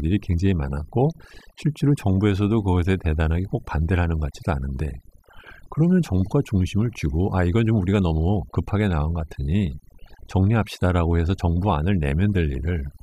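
Overdone noise removal throughout: the reducer cuts any band near its noise estimate, so pauses twinkle in near-silence.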